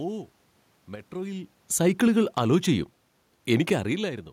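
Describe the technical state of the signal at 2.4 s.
At 2.4 s the automatic gain is falling, from 1.71 to 4.21 s. The control judged the input too loud or its background noise too strong and is easing its gain down about 5 dB. Speech and room noise sink together.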